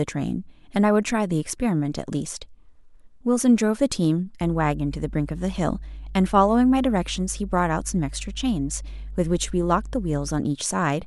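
At 4.41 s a steady low tone enters under the speech and stays until 10.40 s. This is mains hum at 50 Hz. The power line has leaked into the signal path, probably through a ground loop or a nearby transformer. The tone sits roughly 10 dB below the speech, so it is clearly audible. It sounds like a constant buzz with a dull, droning edge.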